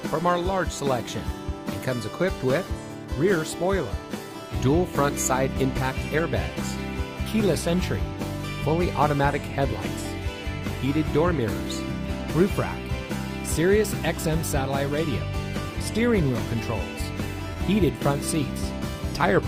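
At 17.53 to 17.58 s comes a short concealed packet loss: about 20 ms of audio arrived too late, and the decoder filled it by stretching the preceding sound for 25 ms. It is a brief smear, not the silent hole of a dropout.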